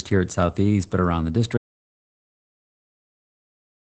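From the start the speech sounds muffled and faintly robotic, with nothing above 8.7 kHz: Opus voice compression, its SILK coder running at what sounds like around 12 kbps. At 1.58 s the audio drops out to silence, dead silence with no room tone through to the end, likely from the input device or link being lost.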